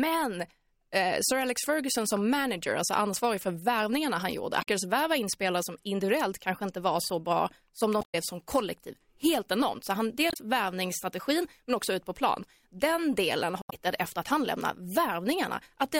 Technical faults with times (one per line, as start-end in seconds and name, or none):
4.59-4.67 damaged data in a compressed stream
7.98-8.15 damaged data in a compressed stream
10.27-10.37 damaged data in a compressed stream
13.59-13.73 damaged data in a compressed stream